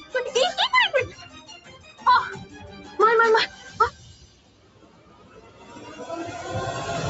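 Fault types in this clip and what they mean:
Noise suppressor applied to music or sounds: A speech-oriented noise suppressor stays active across the whole clip. It treats sustained, non-speech material as noise, so the level keeps being pulled down and released, swinging by roughly 15 dB and giving a pumping, fluttering, thinned quality. Unlike the plain lack of content above 8 kHz, which comes from the Opus call path's bandwidth, this is a continuous movement in level rather than a fixed tonal limit.
Sound cut by the noise suppressor: At two specific points the suppressor clamps down harder. From 1.6 to 2.0 s, about 300 ms of sound sinks by up to about 6 dB. From 4.15 to 5.75 s, around 1.5 s is held down, reaching about 10 dB at its deepest, with sustained and decaying parts cut short. These are localized dips tied to particular sounds, which separates them from the general background pumping.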